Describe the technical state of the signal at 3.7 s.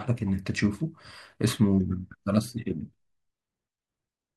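At 3.7 s the speech signal is intact, with no audible fault at that moment.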